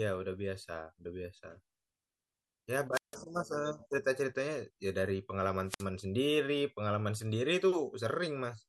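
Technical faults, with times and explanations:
2.92–3.17 s and 5.66–5.87 s, wireless microphone squelch dropout: The radio signal fades and hiss briefly rises. The receiver's squelch then mutes the output, leaving near silence for 159 ms and then 59 ms. The speech returns once the signal recovers.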